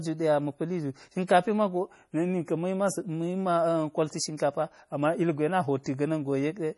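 MP3 compression affects this speech clip from start to finish. Heavy codec damage leaves the sound watery and swirly as weak frequency lines flicker between frames. That points to a very low bitrate, likely around 32 kbps. Pre-echo occurs at 1.27–1.29 s and 4.37–4.40 s. A hiss of about 20 ms and 25 ms comes before each attack, because quantisation noise spread across the whole transform block leaks ahead of the sudden onset and softens it.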